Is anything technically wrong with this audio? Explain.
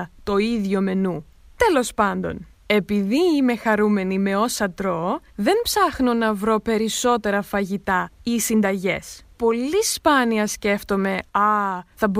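No, the speech signal shows no technical faults from beginning to end.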